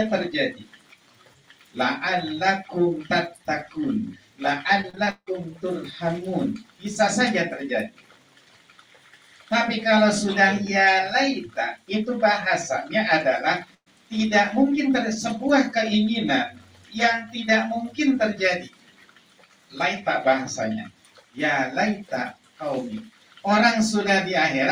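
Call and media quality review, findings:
Repeated packet loss (robotic sound), 4.81 to 5.29 s: choppy stretch with pieces missing. Jitter buffer/PLC side. Five gaps patched by stretching the last audio, 53% of the span concealed, longest gap 163 ms, about 260 ms of real audio gone.

Burst of packet loss, 13.75 to 13.88 s: held sound fading out, then a jump ahead. Receiver concealment filled 115 ms, about 70 ms of it faded to silence. About 120 ms of audio lost outright.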